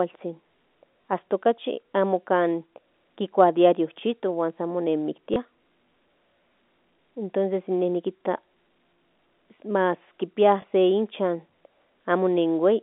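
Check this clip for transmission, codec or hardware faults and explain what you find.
Three small blips break the speech at 1.02 s, 5.34 s and 10.62 s. Each is packet loss with the last packet repeated: about 20 ms went missing, which fits a single lost packet, and the receiver replayed the previous chunk. The telephone-band G.711 A-law line cuts off near 3.6 kHz.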